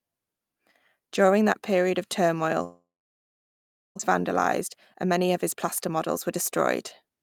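A speech recording where, from 2.63 to 4.01 s, the stream appears to have stopped delivering audio, most likely a long network dropout. The receiver covers the gap by extending the last sound into a fading buzz, and most of the stretch, about 1.1 s, ends up silent. When the speech resumes, about 1 s of it is simply gone, and the talker picks up mid-flow with that part missing. The outage also left the receiver holding roughly a third of a second of extra delay, so from 4.19 to 7.17 s a jitter buffer speed-up drains it. The receiver repeatedly cuts out short pitch-period-length slices, removing roughly 300 ms in total, so the speech plays about 8% faster while keeping its normal pitch and comes across as rushed through to the end.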